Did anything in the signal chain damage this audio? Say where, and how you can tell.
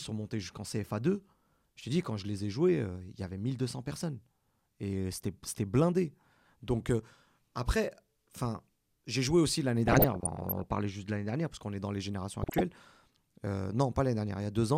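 Yes. DAB burbling at 9.88–10.71 s and 12.42–12.61 s, in the codec stage. Weak reception let bit errors corrupt MP2 sub-bands, putting short blips of noise into single sub-bands.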